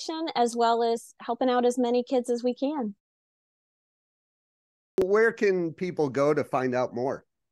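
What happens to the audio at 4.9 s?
A clipped start after a pause runs from 4.77 to 4.98 s. After about 1.85 s of silence, the output device has gone idle and needs time to wake and lock again before it passes sound. The first 210 ms of the returning speech is swallowed, so "where can people go" bursts in abruptly out of silence, with its opening sounds missing and no natural onset.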